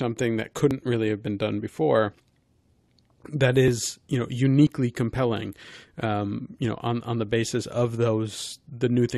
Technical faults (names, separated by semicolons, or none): overlap between stream segments